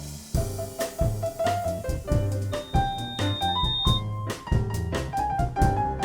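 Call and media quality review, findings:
3.7 kHz tone swelling into a squeal, 2.51–4.03 s, roughly 5 dB over the signal. Loudspeaker feedback squeal: mic picks up speaker, loop gain exceeds unity there.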